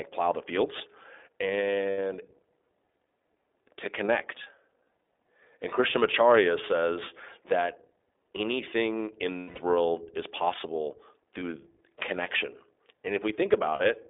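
Speech, squeezed through the iLBC codec the whole way: it's confined to roughly 250 Hz to 3.6 kHz and sounds rough and a bit synthetic, which fits iLBC's 15.2 kbps, 20 ms frame mode. Then there are lost iLBC frames at 1.90–1.98 s, 5.76–5.78 s, 9.38–9.59 s, 11.40–11.44 s and 13.76–13.82 s, where the decoder fills each gap by repeating the last pitch cycle with noise. You hear a brief buzzy held vowel, longest around 9.4 s, before the voice snaps straight back.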